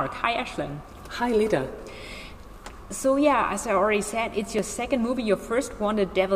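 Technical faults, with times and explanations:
4.59 s, dropped buffer (overrun): the sound jumps ahead by about 5 ms with no gap of silence, likely samples overwritten before being read.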